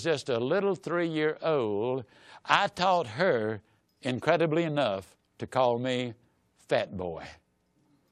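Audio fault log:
2.90–2.95 s, corrupt frame decoded: a brief glitch where one damaged compressed frame was played as-is, misplacing energy across frequencies at a fairly low level.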